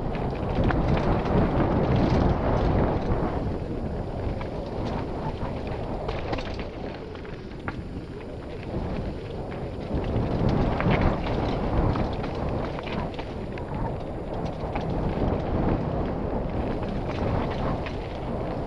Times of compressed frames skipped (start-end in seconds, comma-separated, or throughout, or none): 4.78